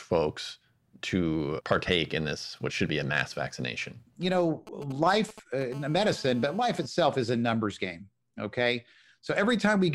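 From 4.67 to 5.63 s, a nearby 2G phone exchanging short signalling transmissions with its network has its radio pulses rectified by the audio circuitry, producing GSM signalling bursts: a galloping dit-dit-dit of ticks and brief 217 Hz buzzes, at roughly 15 dB below the speech.

From 5.72 to 6.86 s, just before "is a numbers game", the phone's continuous call transmission pulsing 217 times a second is again rectified, giving a steady GSM phone buzz: a hard, raspy 217 Hz tone rich in harmonics, about 23 dB below the speech.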